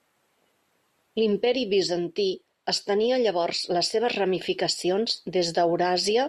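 Nothing in the recording stood out as a fault on listening.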